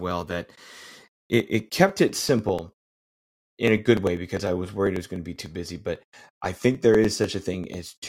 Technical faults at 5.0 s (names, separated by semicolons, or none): periodic USB or driver dropouts